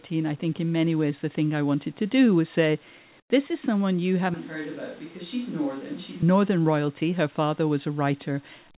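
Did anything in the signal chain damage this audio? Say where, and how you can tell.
Yes. In the call processing, discontinuous transmission likely muted the sender during a pause, so from 3.2 to 3.3 s the receiver plays comfort noise in place of the background. That 100 ms stretch is steady, featureless hiss, about 13 dB quieter than the real room sound.

At the capture stage, a switch to a distant microphone runs from 4.34 to 6.22 s, likely because the close microphone's feed dropped out. The speech turns hollow and roomy and roughly 10 dB quieter, with room noise only about 20 dB below it. Both changeovers are abrupt.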